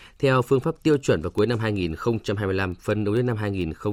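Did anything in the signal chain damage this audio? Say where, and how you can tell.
Yes. Word clock ticks from the digital interface stage run from 0.20 s to 3.91 s, roughly every 0.15 s, around thirty in all. The receiver is clocked independently of the sender, so each time their clocks slip past each other a sample is dropped or repeated, which suggests a mismatch of roughly 150 ppm.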